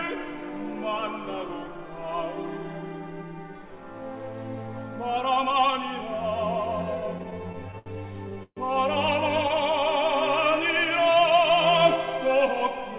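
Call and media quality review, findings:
Repeated stalls (stutter), 7.18–7.88 s: packets arriving late, jitter buffer emptying seven times, last sound extended each time, 138 ms in all, longest gap 72 ms. Audio drags and stutters, nothing lost.

Call audio freeze, 8.43–8.59 s: likely jitter buffer underrun from held-up packets. 136 ms filled, continued sound fading into about 50 ms of silence, then resuming where it stopped over the G.711 path's 4 kHz band.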